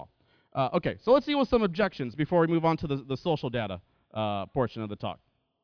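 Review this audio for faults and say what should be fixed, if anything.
No technical faults can be heard in this speech clip. Nothing needs to be fixed.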